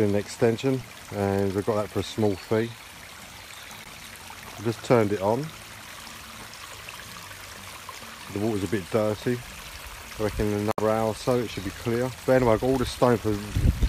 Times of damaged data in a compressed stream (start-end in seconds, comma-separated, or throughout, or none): 3.84-3.87, 10.70-10.79